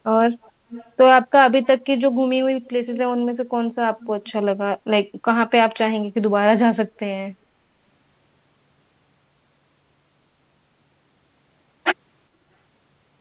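Echo leak appears in short scraps at 0.42–0.51 s, 0.71–0.91 s, 1.62–1.79 s, 2.65–2.69 s, 2.94–2.98 s, 4.01–4.06 s and 4.26–4.32 s. Each is a faint copy of the speech arriving 421 ms late, between about 20 and 35 dB below the main speech, loudest at 0.71 s and 2.94 s. The likely cause is a far-end echo canceller letting loudspeaker pickup slip back into the call. The band-limited sound, with nothing above 4 kHz, points to a narrowband G.711 path.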